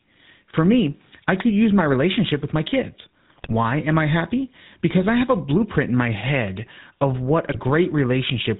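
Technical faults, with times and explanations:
Throughout: GSM full-rate codec. The whole speech track has the gravelly, buzzy grain of the old full-rate coder, which fits the 13 kbps GSM full-rate coder. It rebuilds the voice from a vocal-tract filter fed with a thinned-out, regularly spaced pulse train, so the texture turns rough and reedy. Nothing survives above 4 kHz, which leaves everything dull and boxed-in. The damage is plainly audible on every phrase.
3.3–3.53 s, 4.98–5.05 s, 7.46–7.59 s: GSM bit errors. Corrupted frames hit in three short bursts: after "relationship with my kids" and before "am I happy", after "am I happy" and before "I have a blueprint", and right after "my head of what". When flipped bits land in the filter, pitch or gain values, the decoder builds a wrong spectrum or level for those frames, so you hear squawky, gargled pops. The first and third bursts are the longest and most mangled.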